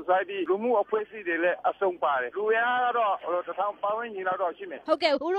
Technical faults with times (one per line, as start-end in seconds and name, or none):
5.11-5.17 compressed frames skipped